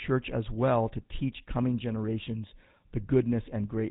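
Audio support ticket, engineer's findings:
GSM full-rate codec across the whole clip, consistent with a 13 kbps path. Coarse pulse-driven vocal-tract model gives speech plainly audible buzzy, gravelly roughness; nothing above 3.8 kHz.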